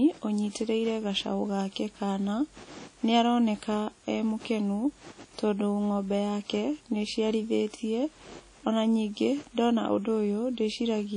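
From start to finish the speech has a ringing, washy quality, with a hiss that swells and fades along with the voice, and there is nothing at all above 10.1 kHz, leaving the top end dull. The likely cause is WMA compression at a low bitrate, about what 32 kbps would give: its long transform blocks smear quantisation noise over tens of milliseconds around each sound, and weak high-frequency detail is discarded entirely.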